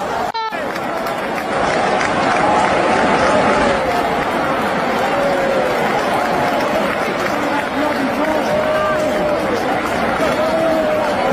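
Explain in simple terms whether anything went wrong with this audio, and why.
Between 1.37 and 3.92 s the sound shows digital radio blending to analogue. The receiver lost its digital signal and faded over about 0.2 s to the station's FM broadcast, then faded back. A faint hiss sits underneath, and the volume shifts slightly. Both changes come from the weaker analogue path.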